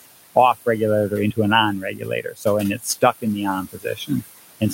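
A speech recording with noise suppressor artifacts throughout. The room noise, about 14 dB below the speech, is pulled down by about 19 dB whenever the talker pauses and comes back up under the speech, because the suppressor estimates the steady background and attenuates those bands frame by frame. This background that rises and falls with the talking sets it apart from plain room noise, which would hold a constant level. There is also speech cut by the noise suppressor, where parts of the talking were taken for noise and turned down with the background: from 1.82 to 2.46 s, just after "an on", with drops of up to about 16 dB over roughly 400 ms; from 2.78 to 3.03 s, just before "in the on", up to about 13 dB over roughly 100 ms; and from 3.66 to 4.23 s, just after "in the on", up to about 19 dB over roughly 300 ms. A talker who simply spoke more softly would not take the background down with them. 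A dropout would blank the whole signal. Here the speech sinks in step with the surrounding noise.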